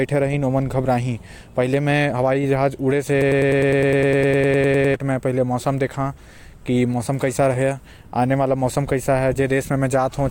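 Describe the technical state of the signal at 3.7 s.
At 3.7 s the speech is caught in a broken-record loop. It runs from 3.22 s to 4.94 s. A fragment of about 102 ms repeats exactly, back to back, 17 times. The result is a rapid, machine-like stutter with no forward progress. The cause is likely a stalled player, encoder or stream that kept resending the last piece it held. The speech that belonged in that span is gone.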